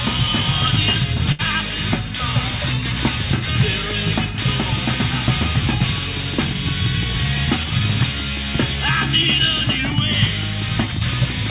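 At 1.32 s there is a short stall from a late packet, lasting until 1.41 s. A packet arrived late and the jitter buffer ran dry. The last sound is held for 68 ms, with a slight buzz or dip. Nothing is lost, but everything after it runs 68 ms late.

From 2.50 s to the end there is a train of clicks. Regular ticks come at about 5.8 per second. They peak around 5 dB above the sound and are heard in the pauses too. The likely cause is interference from nearby equipment.

The call path, which fits G.711 mu-law at 64 kbps, leaves nothing above 4 kHz.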